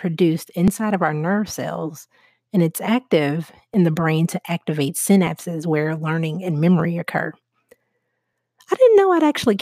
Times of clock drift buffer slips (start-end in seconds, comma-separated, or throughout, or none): 0.68-8.33